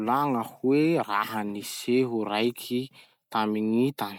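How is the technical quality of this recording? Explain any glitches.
No glitches can be heard anywhere in the recording. The speech comes through without any technical fault to explain.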